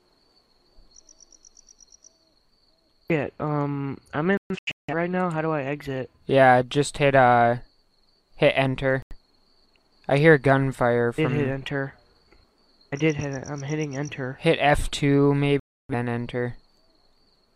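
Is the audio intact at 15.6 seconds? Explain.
No. From 15.60 to 15.94 s the sound goes silent, then returns: a digital broadcast dropout, with the receiver muting until valid frames resumed.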